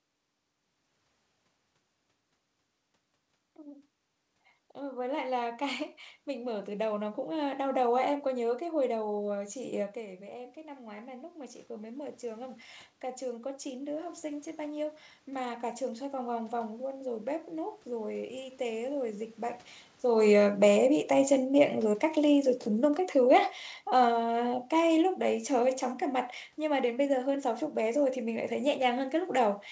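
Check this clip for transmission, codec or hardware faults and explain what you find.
The speech has no transmission or hardware damage, but the automatic gain control audibly pumps the level three times.

The first automatic gain rising runs from 3.63 to 7.23 s and adds about 6 dB. The second comes around 10 s, when the talker moves and the input drops about 13 dB; the AGC climbs about 9 dB between 9.55 and 16.85 s to compensate. In both cases the gain creeps up slowly, so the voice and the room noise behind it swell together rather than the voice alone getting louder.

The automatic gain falling happens after the talker moves again around 20 s. From 20.16 to 25.86 s the AGC pulls its gain down by about 6 dB. You hear the voice arrive loud and then gradually sink over several seconds, with the background sinking right along with it, which is the giveaway that it's the gain stage and not the talker.

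The top end stops at 8 kHz, consistent with a wideband call codec such as G.722.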